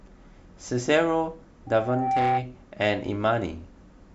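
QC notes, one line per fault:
1.67–2.47 s, loudspeaker feedback squeal: the microphone is picking up its own loudspeaker, and at 780 Hz the loop gain climbs past one. A single steady tone swells over roughly half a second until it sits about 5 dB above the speech, then stops.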